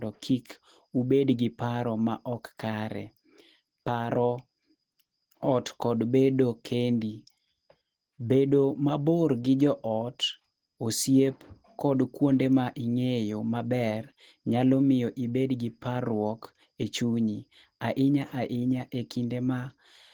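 Opus compression is plainly audible across the whole speech recording, which sounds hoarse and muffled, likely from Opus's hybrid speech mode at a low bitrate around 16 kbps.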